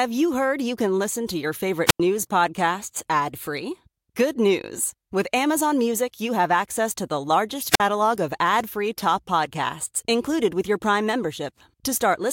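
Wireless microphone squelch dropout at 1.87 to 2.00 s, right after "can listen to your", and again at 7.69 to 7.81 s, just after "access to the largest". The FM radio link from the microphone fades, hiss swells briefly, and the receiver's squelch mutes the output, leaving a hole of near silence about 92 ms long the first time and about 49 ms the second. The speech then returns with "podcasts ad free" and "of ad free top".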